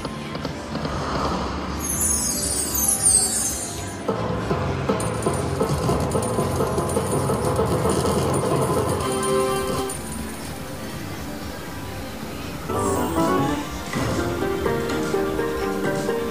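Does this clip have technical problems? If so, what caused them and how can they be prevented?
Yes. From 9.49 s to the end at 16.30 s, the sound turns grainy and gritty, with a distortion that rises and falls with the signal and sits at roughly 20 dB below it. The likely cause is low bit depth without dither: the audio was truncated to very few levels, which fits about 6 bits. That error tracks the signal, unlike the steady, even hiss that dithered requantisation leaves behind. To prevent it, keep at least 16-bit depth throughout and apply dither whenever reducing word length.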